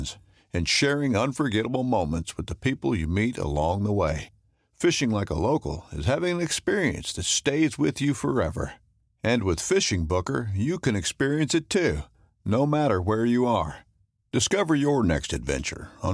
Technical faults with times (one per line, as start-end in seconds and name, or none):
none